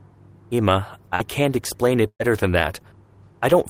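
It's a speech recording with two network dropouts. Around 1.15 to 1.22 s there's short concealed packet loss: roughly 40 ms went missing, and the receiver papered over it with about 44 ms of extended sound, so you get a quick smear. Then from 2.08 to 2.21 s a burst of packet loss takes out about 120 ms; the concealment holds the last sound for roughly 116 ms, fades it, leaves about 70 ms of silence, and resumes further on.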